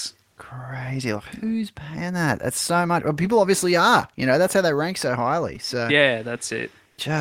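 A repeated buffer occurs at 5.56 s in this speech clip. The incoming audio missed its deadline, so the playback device reissued the most recent block instead of going silent. That block is tiny, which fits a 5 ms buffer, and it plays two extra times back to back, with a hard edge at each join. Because the repeats are so short, the fault is heard as a brief click-like buzz rather than a stutter, and roughly 10 ms of real audio never arrives.

Comfort noise in place of the background appears from 6.87 to 6.97 s, lasting 100 ms. During this stretch the natural background, which sits about 45 dB below the loudest speech, gives way to a smoother synthetic noise of a different tone, only about 1 dB different in level. The likely cause is discontinuous transmission of the kind used by Opus DTX: the sender stops transmitting during the pause, and the receiver fills the gap with generated noise shaped to approximate the background.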